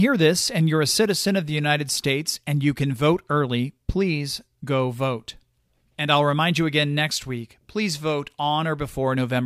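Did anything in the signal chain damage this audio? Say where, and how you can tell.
No, nothing in the signal chain damaged this audio, so there is no stage to point to.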